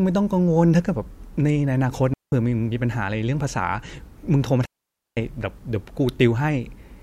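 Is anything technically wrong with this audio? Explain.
Yes: two digital wireless dropouts, from 2.14 to 2.32 s (186 ms) and 4.65 to 5.17 s (517 ms). The receiver loses too much data and mutes with a very short fade, leaving clean holes of near silence without noise bursts, which appear as flat waveform gaps and blank spectrogram columns.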